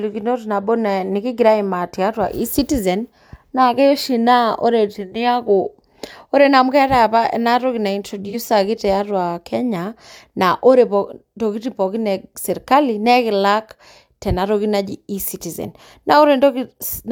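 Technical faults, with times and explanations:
8.29 to 8.35 s, AAC frame loss with concealment: about 43 ms of the speech drops out and is replaced by a brief smeared, noisy patch, which fits a single lost AAC frame. The decoder had no data for that stretch, so it rebuilt it from the last good spectrum with altered phase or interpolated energy. The gap is too short for the concealment to fade to silence, so it is heard as a momentary blur in the speech.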